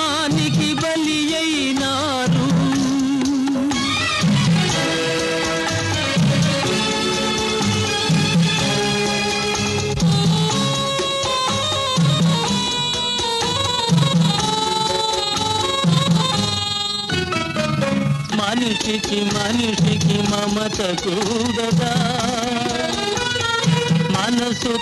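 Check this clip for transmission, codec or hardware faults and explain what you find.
One fault appears, an overlap-add ripple running from 13.51 s to the end. Windowed frames were rejoined with overlaps that don't sum to constant gain, so the level swings by about 6 dB once per frame, around 20 times a second, giving a rough flutter.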